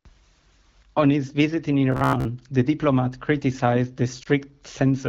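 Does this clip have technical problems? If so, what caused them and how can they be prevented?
Yes. From 1.92 to 2.25 s the speech turns into robotic sound from repeated short buffers. A rigid metallic buzz at about 67 Hz replaces natural pitch, matching a roughly 15 ms chunk looped while most of the real audio is skipped. The likely cause is audio arriving too seldom for playback. A spectrogram shows evenly spaced horizontal harmonic lines, and the waveform shows identical repeating cycles. Larger jitter buffers and a stable audio thread with enough processing headroom would prevent it.

Around 4.23 to 4.28 s there is lost AMR speech frames concealment. It sounds like a brief dip and warble, which fits a single lost 20 ms frame that the wideband AMR decoder bridged using the previous frame's pitch and vocal tract settings at reduced gain. The waveform shows a short amplitude sag, and the spectrogram shows a smeared, slightly faded slice. 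Forward error correction, redundancy or a cleaner radio link would prevent it.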